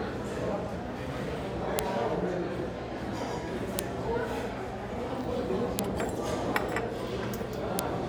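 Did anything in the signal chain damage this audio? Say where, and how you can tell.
Yes. A file header played as audio shows up as sharp, loud clicks at 1.79, 3.79, 5.79 and 7.79 s, spaced exactly 2.0 s apart regardless of what the sound is doing. That regularity points to the storage or streaming stage: separate WAV pieces about 2 s long were joined without their headers being stripped, so each header's few dozen bytes were read as sample values and burst out as a single snap.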